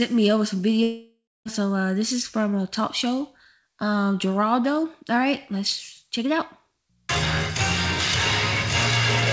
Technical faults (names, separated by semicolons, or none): long network dropout